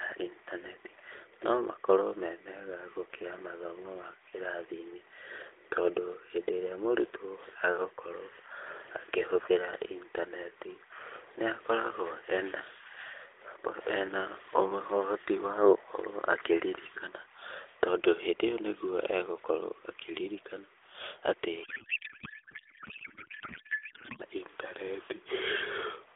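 From 21.64 to 24.22 s, a codec payload misread: the receiver unpacks the AMR frames with the wrong bit layout, which fits octet-aligned data being read as bandwidth-efficient. The narrowband speech, band-limited to roughly 150 Hz to 3.6 kHz, gives way to garbled noise and warble that barely tracks it.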